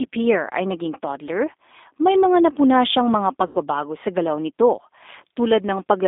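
Throughout, the speech carries G.729 codec damage: the 8 kbit/s coder confines the line to roughly 250 Hz to 3.6 kHz, leaving a rough, synthetic texture. From 3.47 to 3.58 s, between "mga napuna siyang mga" and "sa galaw nito", VoIP packet loss concealed by the speech codec stretches the last sound out and lets it fade. The gap of about 80 ms fits four lost packets.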